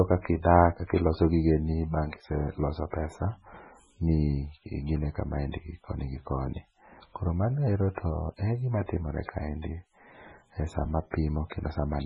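Across the whole speech clip there is heavy MP3 compression damage, likely from encoding at a very low bitrate, which fits something around 16 kbps. Nothing remains above 10.4 kHz, so sibilants lose their top and sound dull, while the starved encoder zeroes weak frequency lines that flicker in and out between frames, giving a watery, swirling texture with metallic chirps on s sounds. On a spectrogram this appears as a hard flat ceiling at 10.4 kHz and patchy, blocky gaps in the upper bands that change from frame to frame.

Just after "e sama", from 11.50 to 11.52 s, a sharp attack is preceded by pre-echo. The codec spread its quantisation noise across the whole block, so noise scaled for the loud onset also fills the quiet moment before it, about 23 ms of it. This is heard as a brief hiss leading into a softened, smeared attack. On the waveform a thin fuzz of low-level noise rises ahead of the transient, and on the spectrogram a faint broadband smear sits just before the onset's vertical edge.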